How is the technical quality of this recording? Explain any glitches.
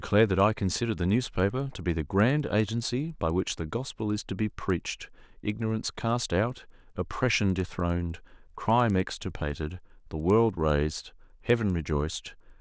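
The recording has one fault, and it runs through the whole speech clip.

The resampler restarted on every block. Each 100 ms block was converted on its own, which fits a change from 48 kHz to 16 kHz. Block edges lack their true neighbours, so each edge carries a small error. The result is a steady tick at 10 Hz, heard only while speech is present.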